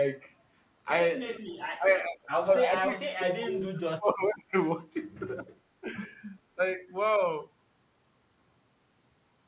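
The speech is band-limited with nothing above 4 kHz, consistent with a narrowband call codec such as G.711. At 1.37 to 1.51 s and 1.76 to 1.91 s, the speech dips by about 15 and about 20 dB, the first of the cases of speech suppressed in double talk. The likely cause is an echo canceller that heard the far side talking at the same time, could not separate the near talker from loudspeaker echo, and attenuated everything. It recurs at 2.09 to 2.51 s (about 20 dB), 2.82 to 4.56 s (the worst, about 35 dB deep, affecting most of that span), 5.81 to 6.02 s, 6.55 to 6.6 s and 6.76 to 6.85 s (about 10 to 15 dB), each heard as a sag or cut-out.

At 2.04 to 2.09 s, just before the third dip, there is an echo leak: a faint copy of the speech arriving 435 ms late, about 30 dB below the direct sound. This is likely residual loudspeaker pickup that the far end's canceller failed to remove and sent back, heard here as a brief ghost.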